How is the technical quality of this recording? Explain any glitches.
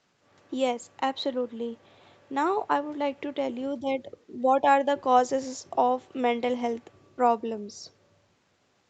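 Nothing stood out on listening to this speech recording, which carries the familiar narrowed top end of a call path with no content above about 8 kHz.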